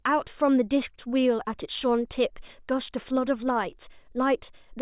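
Nothing in the recording stood out as a technical problem on listening.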